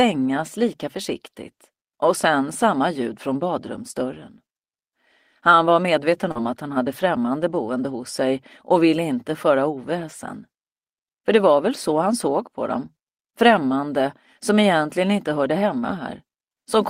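At 6.31 to 6.38 s the audio has a short concealed packet loss. About 40 ms of the stream failed to reach the decoder in time, and the receiver synthesised roughly 36 ms of replacement by extending the preceding sound, pitch-based where voiced and shaped noise where not, before cross-fading back into the real signal. The result is a brief smeared or wobbly patch where the original detail in that stretch is lost.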